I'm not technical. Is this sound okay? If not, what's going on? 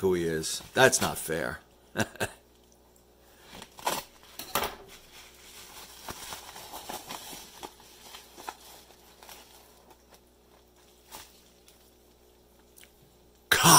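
No. From 6.63 to 8.63 seconds there's an adaptive stream at a lower bitrate: the connection slowed, so playback switched to a lower-quality copy for two seconds. The sound abruptly gets rougher, with no gap, then recovers.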